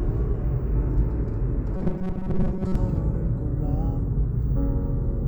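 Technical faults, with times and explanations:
1.76 to 2.75 s, robotic sound from repeated short buffers: a rigid metallic buzz at 188 Hz, likely a 5.3 ms chunk looping through most of this stretch while fresh audio arrived late.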